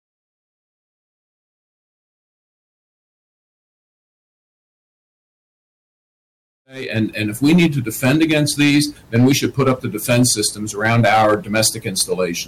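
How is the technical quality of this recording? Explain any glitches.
No glitches; the only level change is a smooth, deliberate fade-in from around 6.5 s to 7.16 s, with no click or hard edge.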